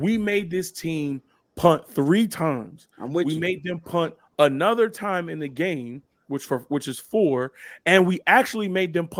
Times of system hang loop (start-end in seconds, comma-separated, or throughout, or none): none